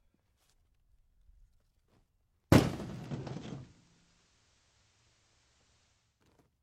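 At 2.75 s the digital radio blends to analogue FM over 0.45 s, returning at 6.28 s. Faint hiss rises, roughly 40 dB down; the level shifts about 3 dB; a spectrogram shows a noise floor filling the gaps.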